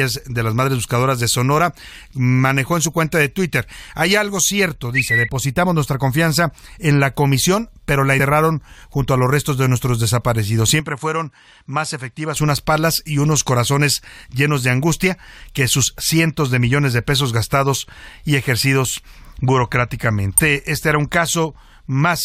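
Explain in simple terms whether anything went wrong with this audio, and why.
At 8.19 seconds, and again from 20.38 to 20.40 seconds, the speech has a tiny glitch. That is damaged data in a compressed stream: part of the file was wrong, so the decoder lost its place and jumped to the next readable chunk.

From 10.8 to 12.36 seconds the speech turns a little duller and somewhat quieter, with the crisp top end gone above about 11.4 kHz, and there is no gap where the change happens. The likely cause is the input switched to a poorer device, such as another microphone or a headset's call mode, that captures a narrower range of sound.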